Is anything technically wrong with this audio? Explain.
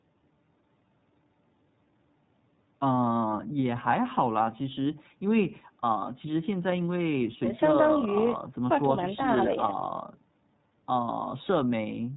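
Yes. Throughout the speech, the iLBC codec squeezes the audio into narrowband and codes each frame's excitation independently, which fits its 30 ms, 13.33 kbps mode. Nothing above 4 kHz survives, so the speech sounds muffled and plainly rough and synthetic.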